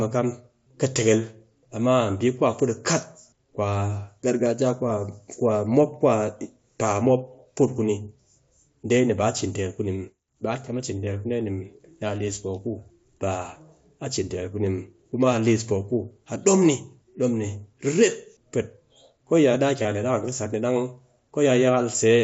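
From 1.65 s to 21.18 s, a click recurs every 1.63 s, roughly fifteen in all, while speech is present. These are clock drift buffer slips. The likely cause is two devices whose clocks differ by around 200 parts per million, so the buffer between them periodically drops or repeats a block of about 15 samples. The strict regular spacing sets them apart from random dropouts.

Between 19.83 s and 19.85 s, a 22.5 ms gap, consistent with about three lost frames, is filled by concealed Bluetooth headset packet loss. The receiver repeats a matching stretch of recent waveform, giving a brief buzzy hold and a slight warble as real speech resumes. Unlike the clicks, it smears rather than snaps, and it sits over the faint graininess of the mSBC link.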